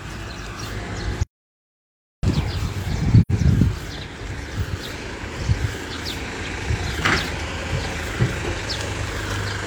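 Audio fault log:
1.23–2.23 s, audio dropout to silence: the sound cuts off abruptly and returns about 1.0 s later, with nothing but digital silence between and no background left. The input was likely lost while recording continued. The waveform shows a flat line, and the spectrogram a fully black vertical band.
3.21–3.31 s, AAC frame loss with muting: a brief hole of about 85 ms, consistent with two lost AAC frames whose spectrum the decoder zeroed. The overlapping windows fade the sound out and back in, giving tapered edges on the waveform and a soft-edged dark gap on the spectrogram.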